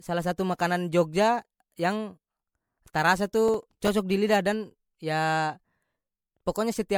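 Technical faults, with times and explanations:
Throughout: generation loss. The speech sounds swirly, smeared and hollow, with soft, blurred consonant attacks and nothing above about 19.9 kHz. That's likely from repeated MP3 passes at 96 kbit/s, maybe five or so, each requantising on a shifted frame grid so the damage stacks.
3.48 to 3.89 s: processor overload crackle. A gritty burst of tearing sits on the sound. The machine seems to have missed about ten buffer deadlines over this stretch, each only a few milliseconds long, and every miss dropped in a hard-edged sliver of silence.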